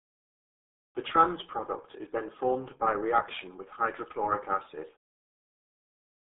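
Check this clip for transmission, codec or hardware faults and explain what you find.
There's one fault, present throughout: RealAudio 14.4 codec damage. Nothing survives above 3.6 kHz, and heavy low-bitrate coding, which fits an 8 kbit/s stream, leaves the speech muffled and gargly.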